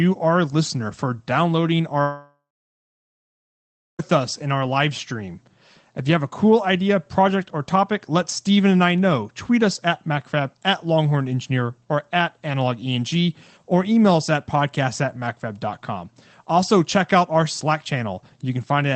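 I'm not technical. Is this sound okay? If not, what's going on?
No. A long network dropout runs from 2.01 to 4.01 s, after "are listener for downloading". The sound smears into a fading buzz, then about 1.6 s of silence, likely because the connection stopped delivering audio. It resumes at "us in our live", with those two seconds lost.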